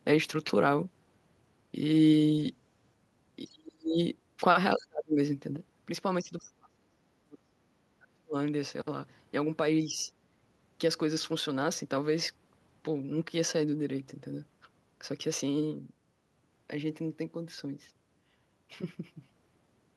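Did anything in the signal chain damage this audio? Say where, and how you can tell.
Yes. Speech suppressed in double talk occurs at 3.46–3.99, 4.76–5.19, 6.22–7.6, 7.98–8.36 and 9.87–10.1 s. The sound falls away by up to about 40 dB, by only about 5 dB in the last. The likely cause is call processing, where the echo canceller confused the talker with loudspeaker echo during overlap and turned both down.

A sudden gain jump occurs at 5.57 s. Speech and background noise drop together by about 6 dB in a single step and stay at that lower level to the end. This is likely a digital gain change applied without a ramp.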